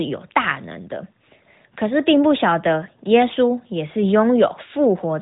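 A speech recording, and nothing in it is technically wrong.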